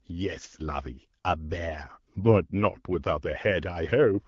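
From 2.22 to 2.28 s the speech turns briefly hoarse and gargly, a sign of AMR bit errors. Around one bit in twenty of the weakly protected payload arrived flipped, across about four 20 ms frames, while the checksum on the core bits still passed. Misplaced excitation pulses and skewed gain and spectral values leave pitch and level roughly intact. On a spectrogram the harmonics smear into scattered noisy energy, and the waveform shows jagged, irregular cycles. The surrounding 12.65 kbit/s AMR-WB coding sounds clear.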